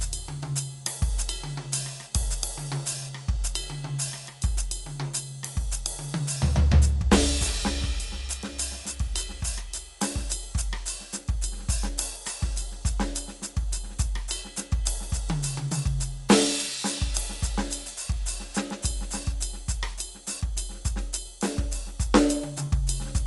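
Music run through Dolby Digital compression at a low bitrate, likely around 64 kbps, throughout: the encoder has narrowed the band so nothing survives above 11.4 kHz, and starved frequency lines are refilled with dither noise, leaving the music plainly dull with a rough, fluttering haze around tones.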